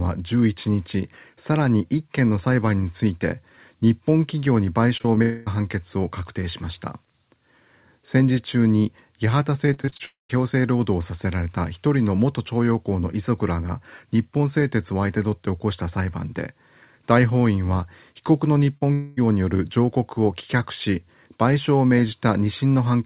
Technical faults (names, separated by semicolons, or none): short concealed packet loss; long network dropout; repeated packet loss (robotic sound)